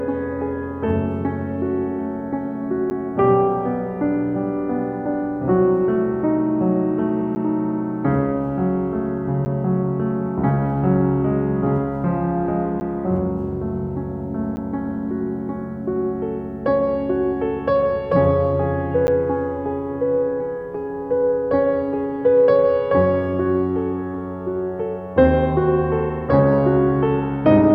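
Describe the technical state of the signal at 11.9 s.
At 11.9 s the music plays through intact, with no dropout, click, distortion or other fault at that moment.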